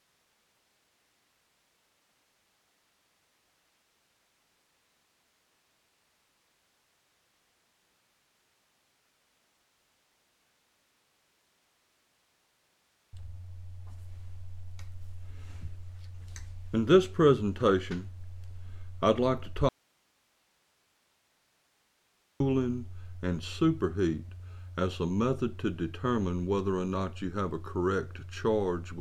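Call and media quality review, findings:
Audio dropout to a faint residue, 19.69–22.40 s: signal cuts abruptly for about 2.7 s, leaving only hiss roughly 40 dB down. Likely input path stays live while the upstream source is lost.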